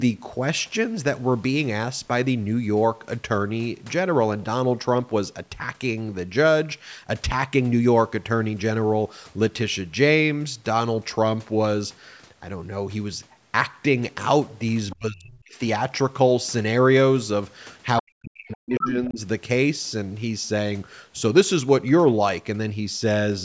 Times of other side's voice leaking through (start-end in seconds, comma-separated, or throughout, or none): 14.90-14.96, 18.51-18.55